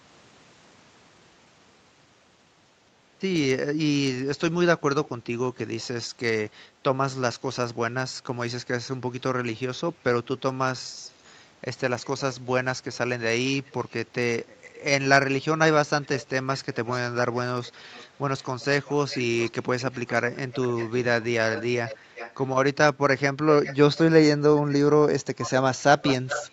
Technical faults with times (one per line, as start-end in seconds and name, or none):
11.12-11.44 echo leak
13.65-14.81 echo leak
16.02-22.52 echo leak
23.63-23.99 echo leak
25.42-26.53 echo leak